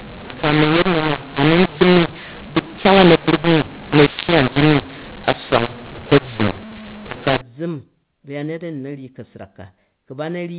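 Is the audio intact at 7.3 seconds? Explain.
No. From 0.0 to 7.41 s a mu-law and A-law mix-up applies: A-law telephone speech decoded as mu-law scrambles levels, making it harsh, distorted and lifting silence into noise.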